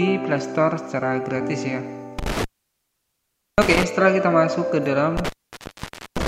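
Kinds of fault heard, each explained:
Intermittent contact: a loose plug or cable briefly opening, so the signal drops out. Here it happens twice, at 2.19 s for about 1.1 s and at 5.17 s for about 0.9 s, each gap crackling at its edges with faint hiss underneath.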